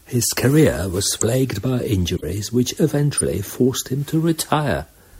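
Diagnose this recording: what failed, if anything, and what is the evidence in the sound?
The codec stage failed, with corrupt frames decoded. Three loud glitches appear: 1.14–1.24 s after "career was", 2.16–2.23 s, and 3.17–3.21 s before "forced him to". Flipped bits misdirected gains and codes, spraying energy across wrong frequencies for two to seven frames each.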